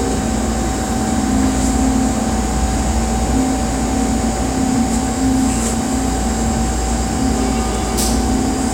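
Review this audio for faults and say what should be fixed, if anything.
Nothing here needs fixing; no faults were found.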